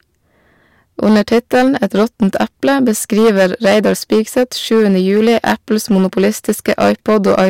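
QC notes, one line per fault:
Throughout, hard clipping: the speech is driven about 14 dB past what the signal path can carry, so every peak is sliced flat and roughly 7 percent of the audio sits pinned at the limit. Those squared-off tops generate harmonics high up the spectrum, heard as a harsh fuzz riding on each loud syllable rather than occasional crackle. Unlike soft saturation, the distortion snaps on abruptly at the ceiling with no gradual rounding, and quiet passages stay clean.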